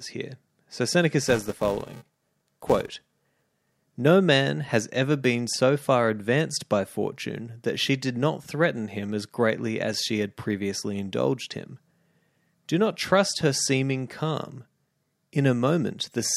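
Filter restarted on every block, from 1.27 to 3.84 s: the filter loses its memory at each block boundary and starts again from silence, so every block opens with a small click. These fuse into a 345 Hz buzz riding on the speech, which fits a 128-sample block.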